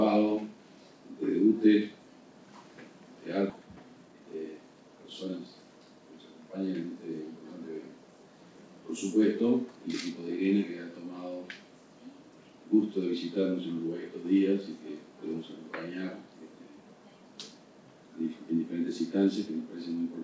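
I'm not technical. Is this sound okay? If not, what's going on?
No. At about 3.5 s there is a skip ahead. Roughly seven-tenths of a second of audio is missing, and playback jumps straight on without a pause.

Right after, from 3.60 to 5.53 s, a jitter buffer speed-up follows. Tiny slices are trimmed out, so the sound runs about 16% fast without changing pitch. It sounds rushed.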